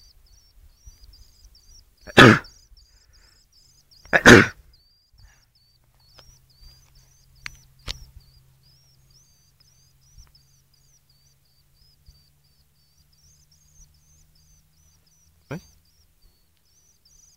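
Regular ticks at 10 Hz run throughout, only while sound is present: a resampler restarted on every block, with 100 ms blocks, consistent with 48 kHz to 44.1 kHz conversion.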